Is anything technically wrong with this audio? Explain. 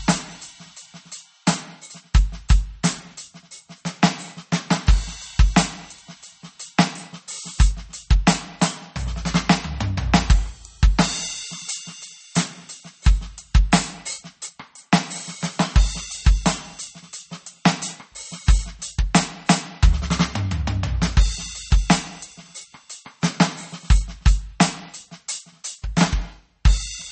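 Yes. Throughout the music there is audible damage, likely from MP3 compression at a bitrate near 32 kbps. Starved of bits, the encoder cuts everything above 8.4 kHz, leaving the audio dull, with plainly audible coding artefacts.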